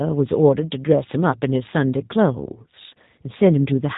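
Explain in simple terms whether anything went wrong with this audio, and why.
Throughout the whole recording, the speech sounds slightly rough, buzzy and synthetic, and it is noticeably muffled, with no crispness or sparkle at the top. That is the sound of the G.729 codec, a telephone-style compression scheme. Instead of sending the actual sound, it sends a compact description of how the speech was formed and rebuilds it at the other end. Everything above about 3.8 kHz is cut off, and the rebuilt speech carries these plainly audible artificial traces.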